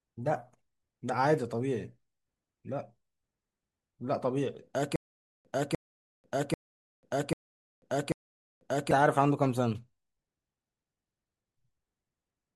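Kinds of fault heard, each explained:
Stutter with silent gaps: 4.96 to 8.91 s, a 0.3 s speech fragment replays five times between 0.49 s digital silences, likely a stalled stream retrying.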